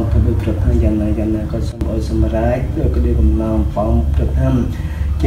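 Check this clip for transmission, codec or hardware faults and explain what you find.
One fault stands out, a sudden gain jump from 1.72 to 1.81 s. Something in the chain likely applied a gain change of about -12 dB instantly, from one sample to the next, with no ramp, such as a setting switched abruptly or a bit shift. For those roughly 90 ms the sound and its background noise both drop sharply together, then step straight back up, leaving an audible dip in level.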